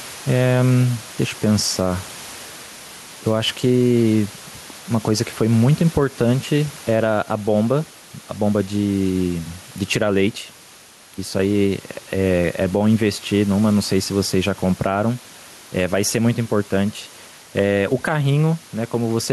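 From start to finish the speech has gain pumping: the room noise sits about 28 dB below the voice, and the gain swings by roughly ten decibels. That pumping, plus the way loud and quiet syllables land closer in level, likely comes from the mic gain being set far too hot with a fast limiter or compressor clamping down on every peak, leaving everything squashed.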